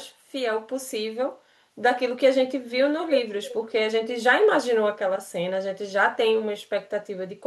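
At 3.49 to 3.54 s a faint, brief scrap of the speech returns as a delayed copy, about 317 ms behind the original and roughly 15 dB quieter. This is an echo leak, likely from a far-end loudspeaker whose echo canceller let some microphone pickup through.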